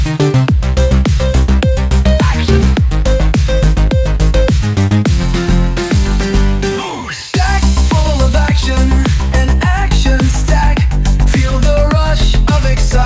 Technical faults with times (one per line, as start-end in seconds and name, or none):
none